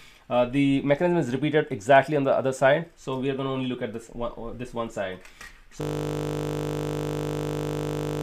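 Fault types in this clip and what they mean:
System hang loop: the machine or driver locked up at 5.81 s while the sound hardware kept replaying its ring buffer, so a 20 ms slice repeats to the end, which fits a roughly 20 ms buffer. At 50 Hz that's a steady buzz, not a stutter.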